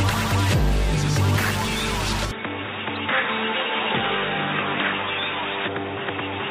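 At 2.31 s the audio abruptly goes dull and boxy with no gap: everything above 3.8 kHz disappears, it gets a few dB quieter, and a new noise floor appears well under the signal. That pattern points to a likely input switched to a poorer device, such as a fallback mic or a headset call profile, and it stays that way to the end. Inside that stretch, from 2.95 to 2.97 s, there's a short glitch. That's a corrupt frame decoded: a single damaged compressed frame was played anyway, so its energy landed at the wrong frequencies for about one frame's length.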